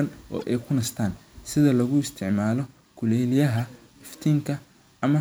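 Corrupt frame decoded at 0.39 to 0.43 s and again at 3.57 to 3.62 s: damaged compressed data was decoded anyway, misplacing energy across frequencies. Each brief burst, consistent with about two frames, sounds like a chirpy blip over the speech, peaking around -20 dBFS, then around -30 dBFS.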